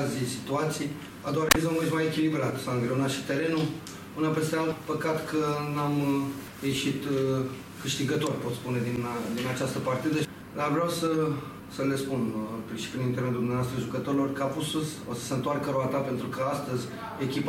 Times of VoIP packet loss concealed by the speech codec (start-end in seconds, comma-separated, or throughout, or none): none